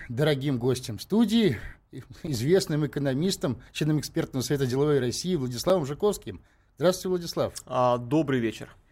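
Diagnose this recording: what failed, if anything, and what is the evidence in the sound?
A block of digital silence occurs twice, at 2.27 s, just before "экономистом членом экспертного совета", and at 5.70 s. Each 5.8 ms gap fits a 256-sample driver buffer not filled in time. The waveform shows flat, near-silent runs with abrupt edges; the spectrogram shows thin full-band vertical lines.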